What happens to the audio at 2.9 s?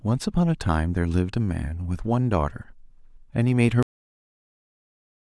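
Nothing goes wrong at 2.9 s: the audio carries straight through that point with no dropout, click, distortion or other break in the signal.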